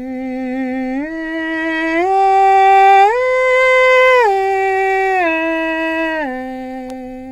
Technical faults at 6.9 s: bit error spike

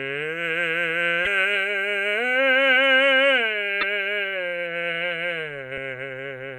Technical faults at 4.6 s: none

